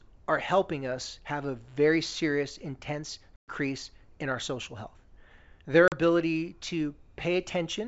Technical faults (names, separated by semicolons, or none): packet loss on an ADPCM call